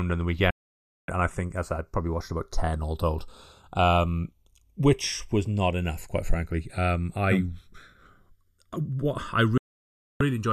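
Throughout the clip, the channels are drifting apart: the two sides run on separate clocks that disagree by around 70 parts per million, so the delay between them grows to about 0.7 ms. In mono, comb notches glide slowly across the spectrum, giving a slow, creeping flange.

A digital broadcast dropout occurs at 0.50 s, right after "and the". The receiver lost valid frames and muted with a 3 ms fade. The speech vanishes for 576 ms, which fits roughly two dozen lost frames, and resumes at 1.09 s on "and I think as". The same dropout recurs at 9.58 s after "what I", silencing 624 ms until 10.21 s. Whatever was broadcast in both gaps is lost.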